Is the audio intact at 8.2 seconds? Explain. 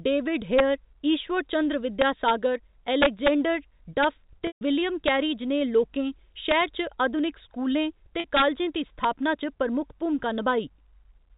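No. At 8.20 to 8.24 s the speech briefly sticks on a slightly held, buzzy tone before carrying on. This is packet loss with pitch repetition: about 40 ms of audio went missing, which fits four 10 ms packets, and the receiver filled the gap by repeating the last pitch period of the preceding sound. The gap was short enough that the repeated cycle bridged it as a held buzz rather than fading into silence.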